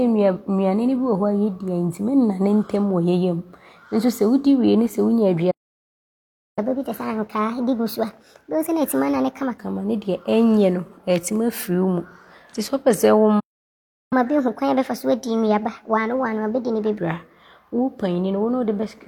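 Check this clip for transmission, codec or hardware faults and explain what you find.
Two playback faults recur twice in this speech clip: stalls, each followed by a sped-up catch-up.

Playback stall, 5.51 to 6.59 s and 13.39 to 14.13 s: the speech cuts out mid-flow for about 1.06 s, then about 0.71 s. The likely cause is the player running short of buffered data or its output thread being blocked, leaving silence until it recovers.

Catch-up at higher speed, 6.59 to 9.59 s and 14.13 to 16.98 s: after each gap the player resamples its backlog at 1.25 times normal speed, so the speech runs faster and sits roughly four semitones higher.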